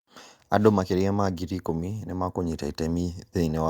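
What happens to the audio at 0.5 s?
Nothing goes wrong at 0.5 s; the speech there plays through intact, with no dropout, click or other fault.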